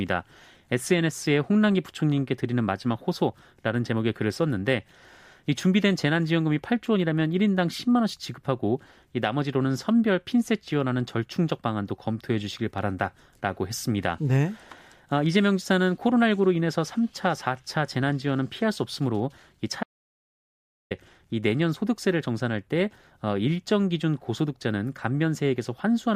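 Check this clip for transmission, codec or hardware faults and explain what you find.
One fault stands out in the speech. From 19.83 to 20.91 s, an audio dropout to silence cuts the sound off for about 1.08 s into silence with no room tone, likely because the input link failed while the recorder kept writing silence.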